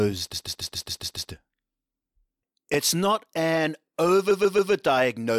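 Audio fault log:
0.33–1.30 s: repeated frames. A 139 ms block of speech plays seven extra times, stuttering and adding about 975 ms.
2.74 s: repeated buffer. A tiny buffer, which fits 64 samples, replays twice after audio arrived late, giving a brief click-like buzz.
4.30–4.72 s: repeated frames. Another 139 ms block repeats three more times, a shorter stutter, adding about 418 ms.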